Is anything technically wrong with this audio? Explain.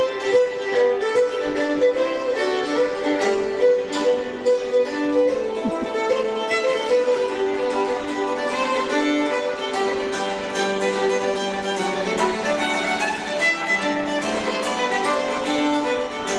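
No, nothing technically wrong can be heard in this audio. Nothing in the sound points to a problem with how it was captured, processed or delivered.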